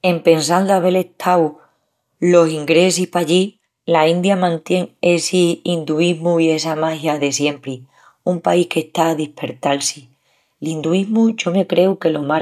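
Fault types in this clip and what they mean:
No faults can be heard in this recording.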